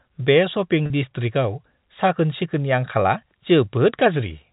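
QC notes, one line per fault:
0.86–0.90 s, packet loss with pitch repetition: about 40 ms went missing, consistent with two 20 ms packets. The gap was bridged by repeating the last pitch period, giving a brief held, buzzy tone instead of the silence or click of a plain dropout.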